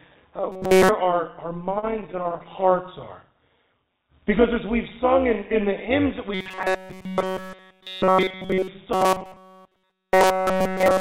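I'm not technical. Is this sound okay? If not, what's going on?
No. There are three problems.

The whole clip has a metallic buzz, with extra tones around each note. This is overlap-add ripple: the audio was chopped into short overlapping slices and stitched back together unevenly, so the loudness pulses about 200 times a second.

From 0.52 to 0.89 s, 6.34 to 8.68 s and 8.93 to 11.01 s, the sound turns into a stiff, metallic buzz. This is robotic sound from repeated short buffers. Fresh audio was likely arriving too slowly, so the software kept replaying a tiny scrap of about 5 ms, which forces a fixed 188 Hz drone.

Between 1.6 and 2.83 s the sound drags and stutters. These are repeated stalls (stutter): the audio ran dry about twenty times, briefly, for up to 33 ms each. The player stretched the last sound to cover each pause, so nothing is lost, but the flow catches. The call connection also keeps nothing above 4 kHz.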